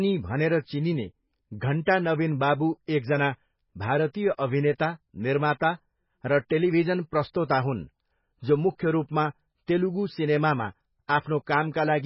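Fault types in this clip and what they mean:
MP3 compression: The speech sounds dull and watery throughout, with a swirling, bubbly texture and nothing above 5.5 kHz, so s sounds lose their crispness. The likely cause is heavy MP3 encoding at a very low bitrate, which fits roughly 16 kbps. Short of bits, the encoder cuts the treble at a fixed point and drops weaker frequency lines, which flicker in and out between frames and produce the swirl.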